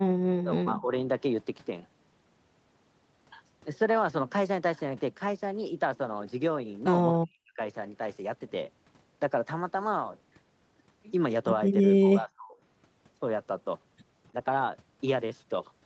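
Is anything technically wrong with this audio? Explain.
Yes. Speech suppressed in double talk occurs at 0.28 to 0.92 s, 7.16 to 7.6 s and 12.04 to 12.55 s. Each time the speech drops by about 40 dB (about 35 dB at the last) and dips for a few tenths of a second. The likely cause is an echo canceller mistaking the talker for loudspeaker echo while both sides spoke, and turning both down. Across the clip, the audio tops out at 8 kHz from the call path's band limit.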